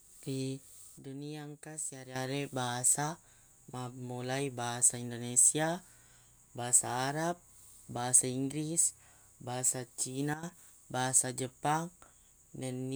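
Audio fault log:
0.98 to 2.16 s and 10.34 to 10.43 s, sudden gain jump: the speech and its background noise drop together, by about 9 dB and then about 12 dB, with abrupt edges. This is likely a gain change applied between adjacent samples without any ramp.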